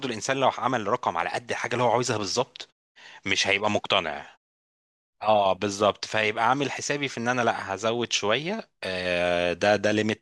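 No technical faults turn up anywhere in this speech recording.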